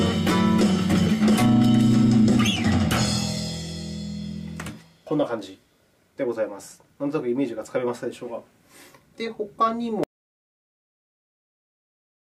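At 10.04 s the audio drops out to silence, with no room tone, through the end, likely from a lost input or stray mute.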